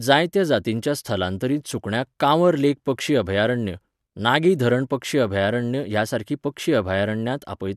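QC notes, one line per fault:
No faults found in this speech clip. Nothing in it needs a QC entry.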